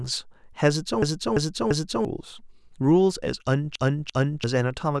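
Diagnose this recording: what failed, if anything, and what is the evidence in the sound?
Repeated buffer at the driver or buffer stage: a 341 ms chunk loops four times from 1.02 to 2.05 s and three times from 3.76 to 4.44 s, which fits an 8192-sample buffer. Late data made the device replay its last block. A spectrogram shows identical tiled blocks with vertical seams.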